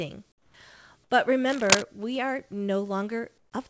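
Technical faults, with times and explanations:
0.32–0.54 s and 3.38–3.52 s, comfort noise in place of the background: the real background drops out, replaced by steady, featureless noise about 7 dB and about 9 dB quieter. This likely comes from discontinuous transmission, where the receiver synthesises filler noise.
1.48–1.83 s, cable scratch noise: dense, uneven scratching bursts sit somewhat louder than the speech, ending just before "we are", likely from a worn cable or connector moving.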